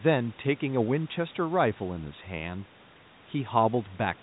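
The speech comes through a narrowband telephone chain, passing the call's microphone processing and then G.711 coding that keeps nothing above about 3.9 kHz, and the signal shows no departure from what that chain normally delivers.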